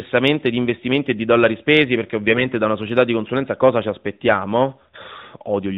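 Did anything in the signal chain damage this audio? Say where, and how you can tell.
Yes. AMR bit errors on the network link, 2.26 to 2.46 s, between "di dollari spesi perché" and "da una società di". Pitch and level hold, but the speech turns scratchy and gargly for nine 20 ms frames. That fits a few percent of flipped low-priority bits that got past the checksum, so pulse positions and fine gain and spectral values decode wrong inside the narrowband AMR stream.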